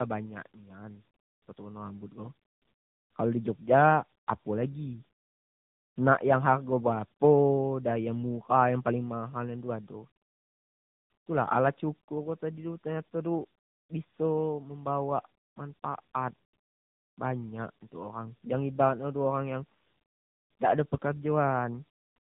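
From start to finish the speech shows tandem speech coding, with nothing above 3.7 kHz. The rough, muffled, warbly texture fits repeated decoding and re-encoding through several narrowband codecs such as AMR-NB, each stage degrading the previous stage's output further.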